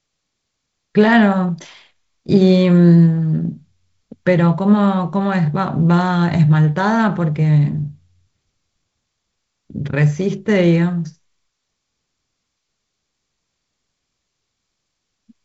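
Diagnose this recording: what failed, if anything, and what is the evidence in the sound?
Nothing failed here: the speech sounds like ordinary G.722 wideband telephone coding, with nothing above 7.7 kHz and just the light hiss and slight grain that fit that codec running at 48 kbit/s.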